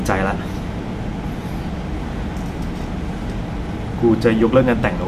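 Speech recording, with no technical faults heard anywhere in the clip.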